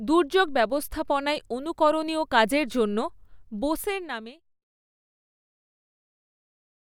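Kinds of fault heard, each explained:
Nothing stood out on listening, and the gentle fade-out near the end sounds like an ordinary deliberate edit.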